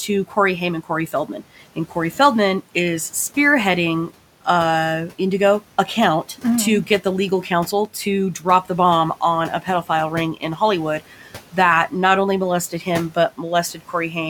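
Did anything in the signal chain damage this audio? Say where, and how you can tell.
Yes. Speech cut by the noise suppressor, between 13.74 and 13.94 s, near the end of the clip. This is a call-processing fault. Within that stretch the sound dips by up to about 8 dB, for roughly a tenth of a second in total, so the tail of the speech turns faint and swallowed. The suppressor misjudged low-level speech energy as background and attenuated it along with the room noise, which sits about 21 dB below the speech.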